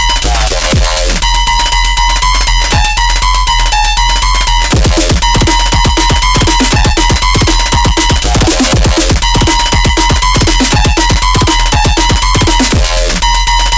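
Aliasing throughout: content above 8 kHz folds back as harsh, unrelated tones roughly 10 dB down, consistent with unfiltered downsampling to 16 kHz.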